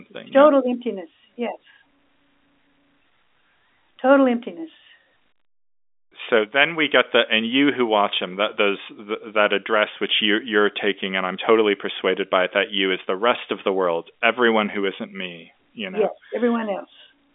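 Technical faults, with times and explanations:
No faults; the speech sits in a narrow telephone band, roughly 250 Hz to 3.6 kHz with nothing above 3.8 kHz, as expected from G.711 A-law telephone coding.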